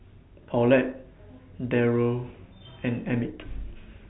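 No technical faults occur at any point in the speech, which is carried over an ordinary telephone channel with nothing above about 3.9 kHz.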